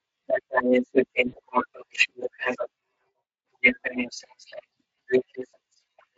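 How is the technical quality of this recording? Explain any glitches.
Two short dropouts interrupt this speech recording, both from VoIP packet loss concealed by the speech codec. The underlying coding sounds like Speex at a fairly generous rate, perhaps around 24 kbps, with only light hoarseness.

The first and longer gap runs from 1.27 to 1.36 s, about 60 ms of lost audio, which fits three missing 20 ms frames. The second, at 5.51 to 5.54 s, fits a single frame. With no packets arriving, the decoder kept repeating its last pitch and vocal-tract filter while lowering the gain. So each gap is bridged by a stretched continuation, a buzzy tone or coloured noise, that fades rather than falling silent. On a spectrogram the harmonics run flat and frozen, then dim. In the waveform the gap shows as a short stretch of repeating periods whose amplitude decays.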